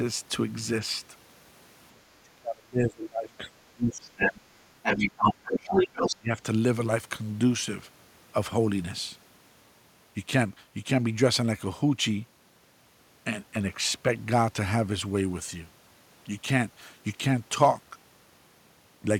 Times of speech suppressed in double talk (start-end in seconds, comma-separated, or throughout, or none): 2.09-4.31, 4.97-5.85, 6.19-6.39